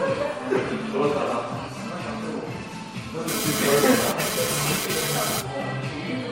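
Throughout, the audio sounds swirly, smeared and hollow, with blurred attacks and nothing above 16.6 kHz. This is likely generation loss: repeated MP3 decoding and re-encoding, around seven passes, at what sounds like 64 kbit/s, each pass quantising on a shifted frame grid so the noise and spectral gaps build up.

From 3.28 s to 5.41 s a hard, raspy buzz at 217 Hz cuts in and out, rich in harmonics and sitting only about 2 dB below the sound itself. This is GSM phone buzz: a nearby 2G phone sending data in bursts, its radio pulses rectified by the audio circuitry.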